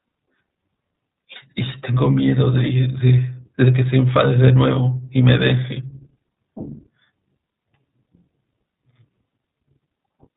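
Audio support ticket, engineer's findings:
iLBC codec, full length of the speech. Band-limited, nothing above 4 kHz. Rough, slightly synthetic texture, plainly audible. Cause: narrowband VoIP coding, excitation rebuilt per frame with no carry-over. Roughness fits 20 ms frames at 15.2 kbps. Component: iLBC encoder/decoder in the call path.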